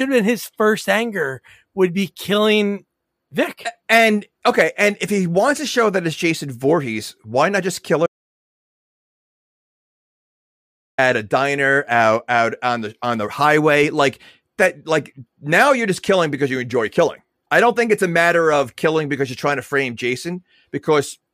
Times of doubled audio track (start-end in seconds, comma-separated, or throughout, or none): none